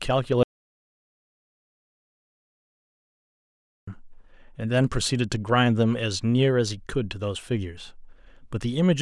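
From 0.43 to 3.87 s, an audio dropout to silence erases about 3.44 s of speech, likely from lost input; the waveform flatlines and the spectrogram goes completely blank.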